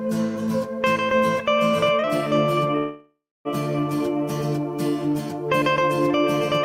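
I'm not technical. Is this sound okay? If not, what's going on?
No. From 2.77 to 3.48 s there's a call audio freeze: the sound stalls into a fading buzz, then about 0.28 s of silence, and resumes where it stopped. Unlike a dropout, nothing is lost; everything after simply arrives about 0.68 s late, likely because network delays held up the audio.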